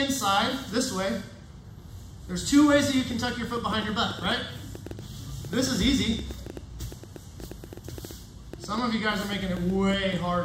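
From 3.11 s to 10.18 s, a train of clicks ticks at about 7 per second, irregularly spaced, roughly 5 dB above the sound, likely interference from nearby equipment.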